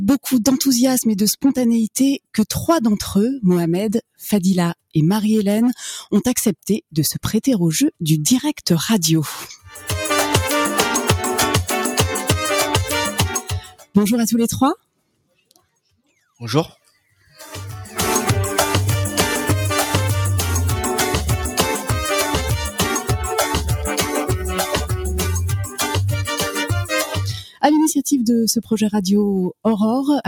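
A noise suppressor made for speech is applied to this sound throughout. It treats steady tones, ambience and reverb as noise and pulls them down, while sharp onsets pass. The level therefore swings by a few decibels as the processing engages and releases. Held parts sag, tails shorten, and the whole thing pumps and thins rather than sitting steady.

In five places the suppressor cuts the sound much harder than the rest. These are 13.42 to 13.95 s, 14.75 to 16.41 s, 16.69 to 17.38 s, 25.65 to 25.8 s and 27.4 to 27.63 s. The deepest drops are about 21 dB in the first two, about 15 dB in the third, about 9 dB at 25.65 s and about 19 dB at 27.4 s. The cut affects only part of most spans, around a second in the longest. Sustained material sinks or decays early there, while attacks survive.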